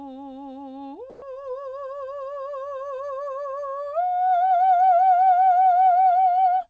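A music recording that has passed through a call codec, with nothing above 8 kHz, which fits G.722 at 64 kbps. From 1.10 to 1.22 s, a 120 ms stretch of the quiet background, which sits about 23 dB below the loud passages, turns into a flat, featureless hiss about 4 dB quieter. The detail of the real background disappears. The likely cause is comfort noise in place of the background. The sender's voice detector treated the lull as silence and stopped sending. The receiver then filled the gap with synthetic noise until the music resumed.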